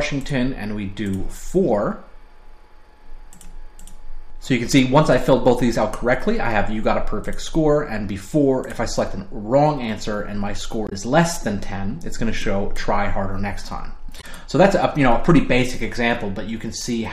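At 10.87 to 10.93 s and again at 14.19 to 14.24 s, damaged data in the compressed stream throws the decoder off: the bytes it reads there no longer form valid frames, so it misinterprets or discards them and has to hunt for the next intact frame header before it can resume. Each episode lasts about 60 ms and comes through as a short, harsh blip that breaks abruptly into the audio before normal playback picks up again.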